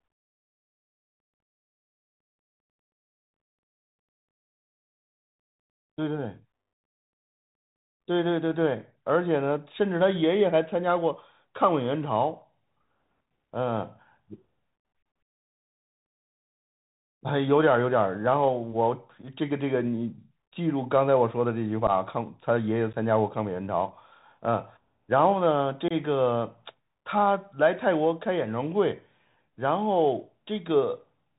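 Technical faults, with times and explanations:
Throughout, Bluetooth CVSD headset codec: the sound is cut off above 4 kHz, with scratchy sibilants, overloaded loud high sounds and a granular hiss, consistent with a 64 kbps CVSD link.
21.87–21.90 s, 22.93–22.95 s and 25.88–25.93 s, unconcealed Bluetooth headset packet loss: roughly 11, 11 and 22 ms of lost packets were replaced by silence or an idle pattern, leaving abrupt holes after which the speech comes back momentarily quieter.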